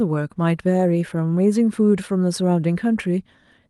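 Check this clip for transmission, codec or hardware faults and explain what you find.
No faults can be heard in this clip.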